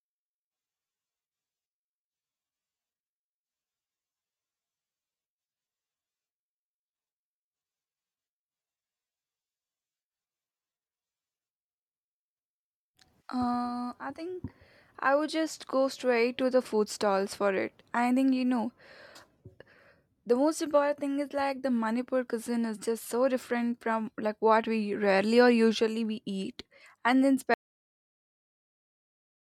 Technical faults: audio dropout to silence

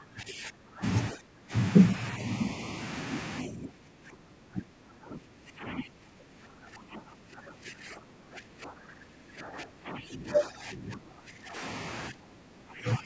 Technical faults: speech suppressed in double talk

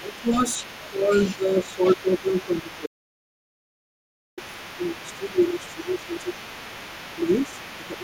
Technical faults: speech suppressed in double talk; other side's voice leaking through; audio dropout to silence

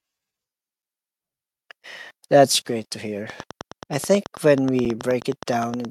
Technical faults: gap between chunks; train of clicks

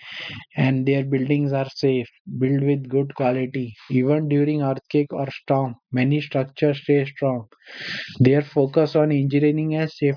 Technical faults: none

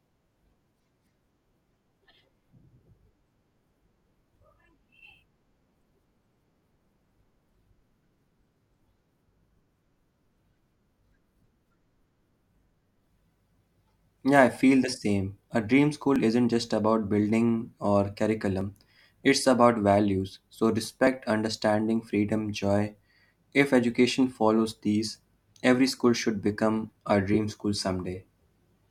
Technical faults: clock drift buffer slips

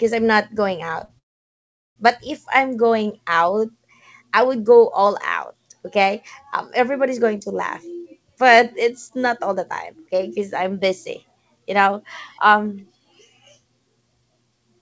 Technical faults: repeated stalls (stutter); call audio freeze; jitter buffer speed-up

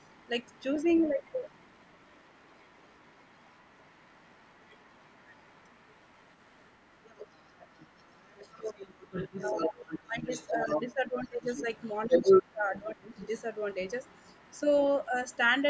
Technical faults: other side's voice leaking through; speech suppressed in double talk

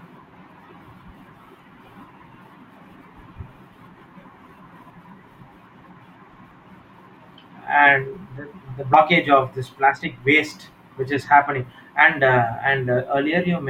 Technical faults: compressed frames skipped

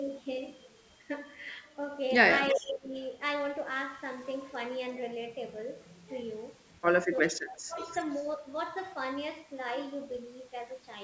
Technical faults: sample clock jitter; echo leak; speech suppressed in double talk

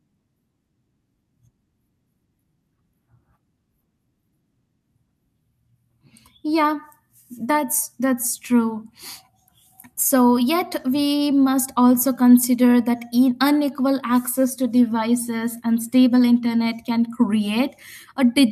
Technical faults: none

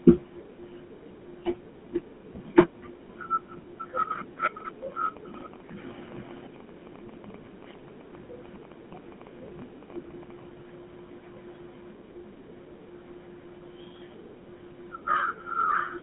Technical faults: GSM full-rate codec

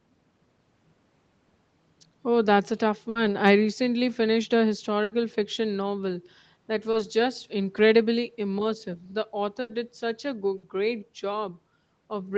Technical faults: burst of packet loss; short concealed packet loss

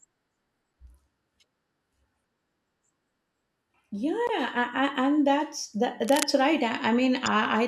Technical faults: damaged data in a compressed stream; cable scratch noise

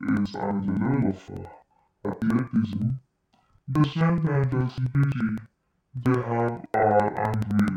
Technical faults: interleaved audio read as planar

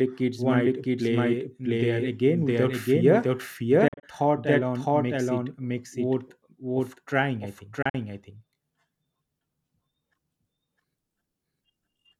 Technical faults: doubled audio track; Bluetooth dropout

